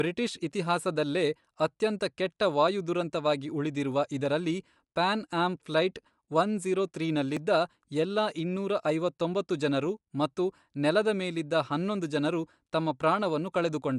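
Throughout the speech, likely Bluetooth LC3 compression with 10 ms frames, consistent with about a 48 kbps stream, adds a plainly grainy, breathy edge. At 7.37 s, just after "ಆಮ್ ಫ್ಲೈಟ್ ಒನ್ ಝೀರೋ", a dropped buffer (overrun) likely threw away a millisecond or two of samples, splicing the sound together with a small jump.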